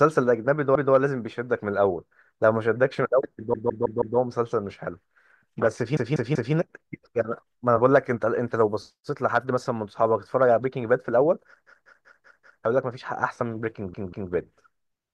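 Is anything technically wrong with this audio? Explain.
Yes: there are repeated frames in this speech. A short run of compressed frames was sent more than once, so the decoder replays the same stretch and the speech stutters and runs longer. It happens five times:

0.75–0.94 s, a 192 ms block played once more.
3.54–4.18 s, a 160 ms block played four extra times.
5.97–6.54 s, a 192 ms block played three extra times.
11.66–12.62 s, a 192 ms block played five extra times, the longest stutter.
13.94–14.32 s, a 192 ms block played twice more.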